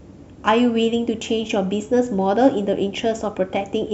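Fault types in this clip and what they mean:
Listening through this speech clip, nothing stood out as a technical fault.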